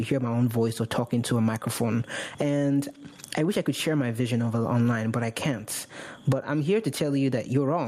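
From the start, loud and soft parts sit closer in level, swinging around 20 dB, a squashed sound of gain pumping, likely from excessive input gain driving a fast limiter.

Throughout, small timing hiccups recur at uneven intervals, the sign of clock drift between sender and receiver, with the sender's clock running roughly 4 percent faster.

From 0.13 s to 7.67 s, small irregular hiccups keep clipping the flow as repeated timing corrections trim short pieces, holding playback at 104 percent speed.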